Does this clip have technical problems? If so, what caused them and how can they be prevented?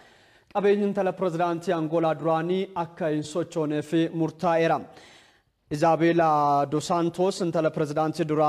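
No, there are no technical problems to hear in this clip. With nothing at fault, no cause needs tracing and there is nothing to prevent.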